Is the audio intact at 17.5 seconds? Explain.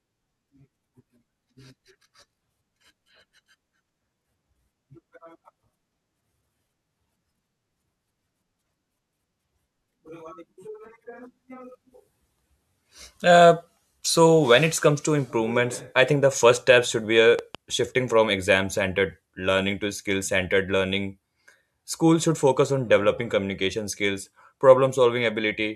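No. From 17.39 to 17.57 s the speech is hit by a loud pop, likely a sudden voltage step or pulse from a plug, a switch, static or a driver glitch entering the signal chain. The circuits downstream shape that pulse, and it is heard as two sharp pops in quick succession, peaking around 5 dB above the speech, while the talking continues underneath. It falls just after "step should be a" and before "shifting from exam centered".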